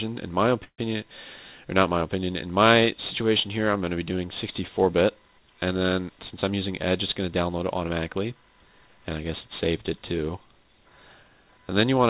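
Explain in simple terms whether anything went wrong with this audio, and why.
Delayed packets likely emptied the jitter buffer, causing a call audio freeze: from 0.64 to 0.80 s the sound fades into silence, then resumes where it stopped.

Later, the jitter buffer held too much audio, so a jitter buffer speed-up trimmed tiny slices from 6.50 to 6.90 s, making that stretch run about 8% faster, at the same pitch.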